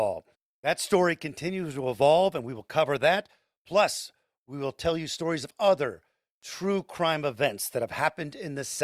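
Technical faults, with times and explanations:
No technical faults detected.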